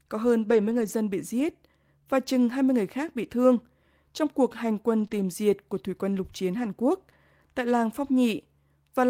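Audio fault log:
0.49–0.91 s, 4.99–5.05 s and 5.11–5.25 s: lost packet rebuilt from error correction. Each stretch sounds rougher and grainier but never drops out. The packets were lost, and each following packet carried a low-bitrate spare copy that the decoder played instead. The first stretch holds about 220 ms of rebuilt audio, which fits a run of about eleven lost packets. The later two hold about 40 ms and 80 ms.
5.07–5.11 s: short concealed packet loss. About 20 ms never arrived in time, and the receiver filled roughly 15 ms of it by extending the preceding sound, from its pitch or as shaped noise, before blending back into the real audio. The result is a brief smear or wobble wedged between the two rebuilt stretches, and a short consonant could disappear in it.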